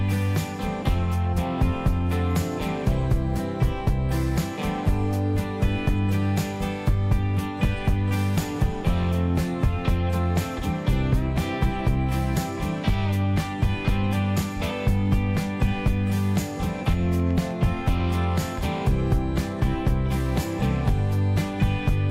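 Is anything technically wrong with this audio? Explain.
Yes. From 16.92 to 18.79 s, a train of clicks appears: about seven irregular pops, roughly 3.2 per second, as loud as the sound. Likely caused by interference or a faulty connection or power supply.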